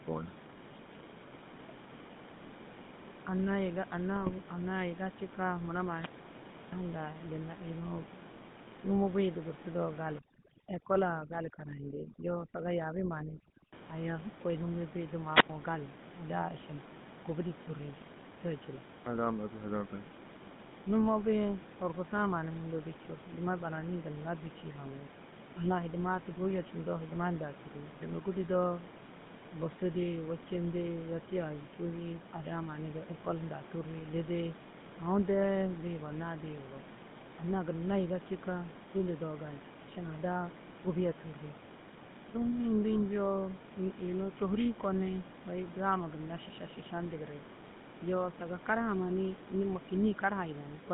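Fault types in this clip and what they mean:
GSM full-rate codec: the old 13 kbps mobile coder squeezes the speech into roughly 150 Hz to 3.7 kHz, and you can plainly hear its buzzy, gravelly roughness all the way through.
GSM bit errors: corrupted frames reach the decoder and bend the spectrum or level, giving brief squawky, gargly bursts at 4.16 s and again at 42.93 s.
Overdone noise removal: from 10.2 to 13.7 s the noise reduction bites too hard, leaving twinkly near-silence under the speech, clearing just before "aya kôi".
Wireless microphone squelch dropout: at 15.33 s the radio link fades, there's a puff of hiss, then the receiver mutes for about 93 ms before the speech returns.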